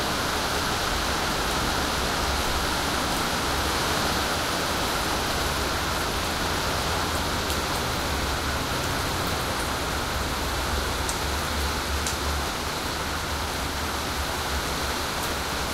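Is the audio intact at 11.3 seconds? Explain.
Yes, at 11.3 seconds the sound plays through cleanly, with no dropout, click, distortion or other fault.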